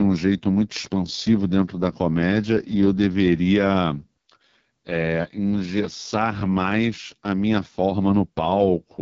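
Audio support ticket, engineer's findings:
Rough, raspy speech throughout, nothing above 7.5 kHz. Points to AMR wideband (HD Voice) codec at its lowest rate, around 6.6 kbit/s: pulse-driven vocal tract model starved of bits, band above 6.4 kHz just shaped noise. Heavy damage, whole clip.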